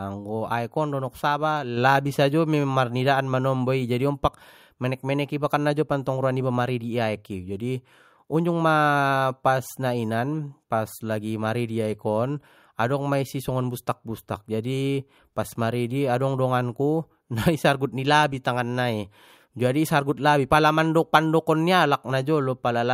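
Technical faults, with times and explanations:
1.77 s, microphone volume stepped up: right after "aek on donok saba" the speech and the room noise behind it both jump by about 4 dB in one go. The call software decided the mic was too quiet and bumped the input gain.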